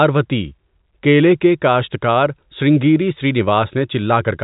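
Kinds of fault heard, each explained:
No faults are present; the speech comes through a G.711 telephone path, so nothing above 4 kHz remains, and a faint quantisation hiss rides along with the signal level, as expected for that coding.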